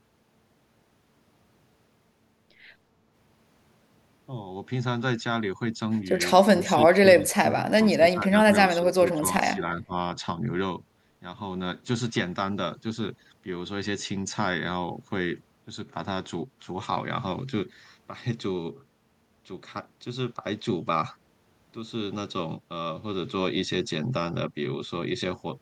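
An echo canceller that likely could not tell the near talker from loudspeaker echo while both sides spoke at once turned the speech down as if it were echo: speech suppressed in double talk. From 6.5 to 8.33 s the speech dips and breaks up for about a second and a half in total, sinking by as much as about 30 dB. A milder repeat runs from 8.77 to 9.92 s, with dips of about 15 dB.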